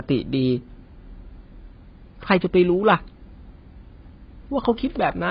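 From start to finish the speech is dull and smeared, with a warbling, fizzy edge on sibilants, consistent with heavy AAC compression, likely at a very low bitrate. Nothing survives above 5.2 kHz, so a spectrogram shows a hard ceiling there.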